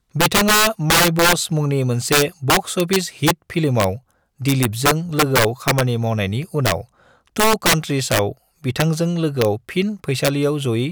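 Speech with integer overflow throughout: peaks driven about 10 dB past full scale wrap to the opposite sign, giving violent cracks, seen as full-range spikes and broadband vertical streaks on roughly 2 percent of samples.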